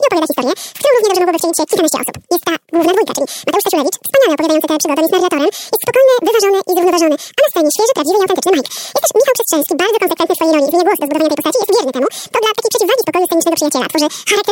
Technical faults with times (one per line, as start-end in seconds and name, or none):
0.00-14.51 audio read two samples at a time (double speed)